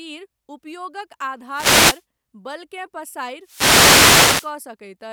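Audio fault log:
1.49–2.04 s and 3.42–4.57 s, wireless microphone noise hit: the radio link fades as reflected signals cancel, so receiver hiss surges over the speech as a swish of static. A spectrogram shows broadband noise washing over the speech, and the waveform's floor thickens.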